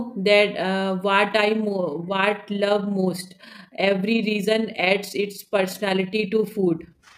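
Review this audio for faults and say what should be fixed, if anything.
From 1.24 s to the end, the speech takes on a fast, rough flutter, a tremolo in which the level pumps up and down by about 6 dB at around 30 Hz. This is overlap-add ripple: the audio was split into windowed frames and rebuilt with window shapes and overlap that do not add up to a constant gain, so the gain varies across each frame and the loudness rises and falls once per frame. To prevent it, use an analysis and synthesis window pair and hop size that meet the constant-overlap-add condition, or normalise the summed windows during resynthesis.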